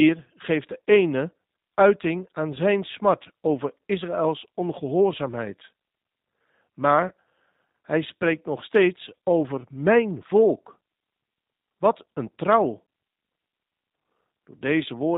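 From start to end the speech carries G.729 codec coloring. Nothing above 4 kHz survives, and the voice is rebuilt from a vocal-tract filter, a pitch predictor and a few pulses per frame. The result is intelligible but plainly rough and synthetic, consistent with G.729A at 8 kbit/s.

At 7.08 to 7.12 s there is VoIP packet loss concealed by the speech codec. About 30 ms of audio is missing, consistent with a single lost packet. The decoder extends its last pitch and filter at falling gain, so the sound is briefly stretched and fades before recovering.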